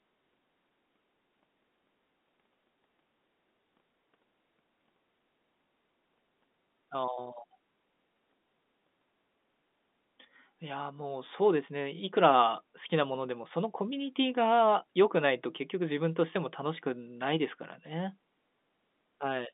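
No faults can be heard anywhere in this speech.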